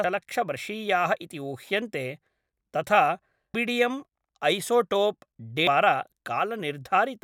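Damaged data in a compressed stream shows up three times in this speech, at 0.04 s, 3.54 s and 5.67 s, each a brief chirp, squawk, click or short hole. At those points corrupted bytes leave the decoder unable to read a frame properly, so it loses sync and hunts for the next valid frame header.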